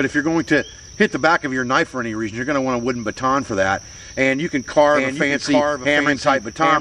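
At 4.74 s a doubled audio track begins and runs to the end of the clip. A second copy of the sound enters abruptly, trailing the original by roughly 0.7 s. It sits somewhat quieter, about 5 dB down. The copy is full-band and dry, with no decay or room colour. It likely comes from the same audio being captured twice, once through a slower path, and mixed back in out of step.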